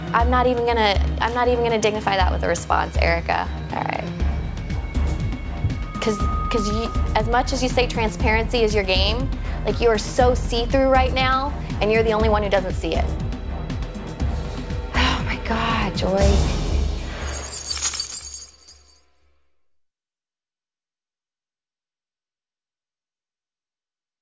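No technical faults can be heard anywhere in this recording.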